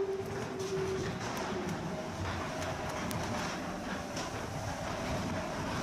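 From 0.13 s to 5.60 s, word clock ticks recur around every 0.3 s, about twenty sharp clicks of uneven strength. An unlocked receiver clock drifting roughly 100 ppm drops or repeats one sample each slip, leaving evenly spaced thin vertical broadband lines on a spectrogram and single-sample steps in the waveform.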